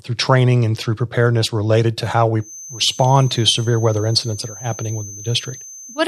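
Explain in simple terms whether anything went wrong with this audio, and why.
From 2.37 s, right after "preparedness related to how", a feedback whistle near 6.2 kHz rings faintly to the end, likely from speaker-to-microphone pickup, swelling and fading slowly rather than building into a howl.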